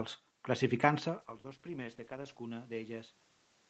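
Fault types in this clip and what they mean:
Call bitrate drop: from 1.18 s to 2.73 s the speech turns coarse and watery as the call's bandwidth estimate fell and Opus coded with far fewer bits, which fits a fall from 32 to about 11 kbps, held lowest for 1.23 s.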